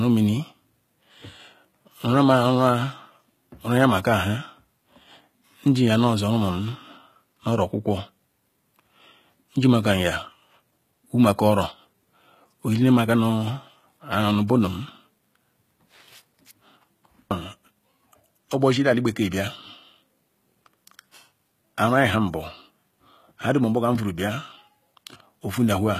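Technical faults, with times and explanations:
Throughout, HE-AAC compression: the speech treble sounds synthetic, with gritty, lispy s sounds and nothing above 14.9 kHz. That's likely the codec rebuilding the top end by copying lower bands upward, at a rate fitting around 20 kbps.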